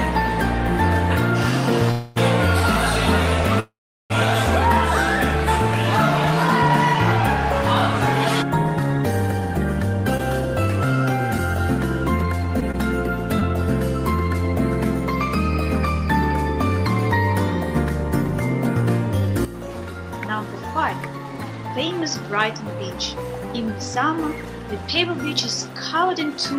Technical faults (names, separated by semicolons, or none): call audio freeze; scattered short gaps; jitter buffer speed-up